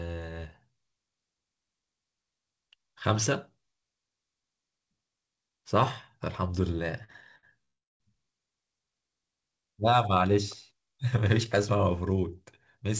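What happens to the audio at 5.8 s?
At 5.8 s the speech carries on intact, with no dropout, glitch or distortion, only the steady band limit of the call path, which leaves nothing above 8 kHz and fits a wideband G.722 link.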